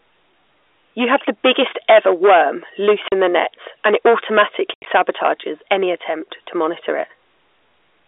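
A speech recording over a telephone line with G.711 coding, whose 300 to 3600 Hz band is audible. The signal was overdriven by about 11 dB, causing hard clipping: a small share of peaks are cut flat, which adds crackle on the peaks. The network also dropped packets, causing packet loss filled with silence. The receiver inserted silence where audio was missing, so the sound cuts out with hard edges. This happens for 40 ms from 3.08 to 3.12 s, between "biggest ever worm loose" and "in the net and". It happens again from 4.74 to 4.86 s, where 100 ms goes missing in scattered gaps, the longest lasting 80 ms, which fits 10 ms packets.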